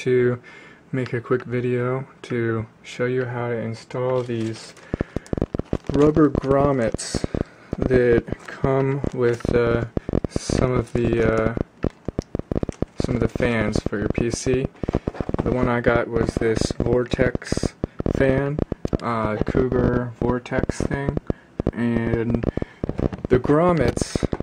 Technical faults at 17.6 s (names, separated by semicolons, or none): train of clicks